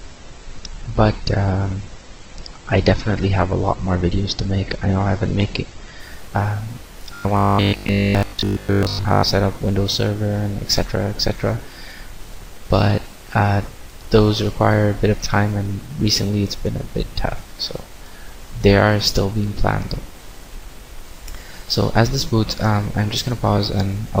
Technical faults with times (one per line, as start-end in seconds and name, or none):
0.00-6.00 adaptive stream starting at a low bitrate
7.15-9.23 robotic sound from repeated short buffers